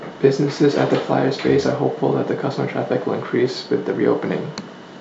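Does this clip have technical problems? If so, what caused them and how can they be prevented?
No, nothing stood out as a technical problem on listening, so there is no cause to trace or prevent here.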